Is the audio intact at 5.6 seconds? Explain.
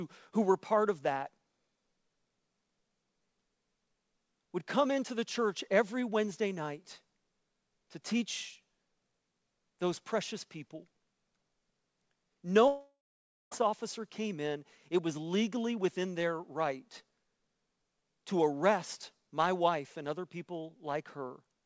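Yes, the speech at 5.6 seconds is intact, with only the steady band limit of a G.722 call path, which leaves nothing above 8 kHz.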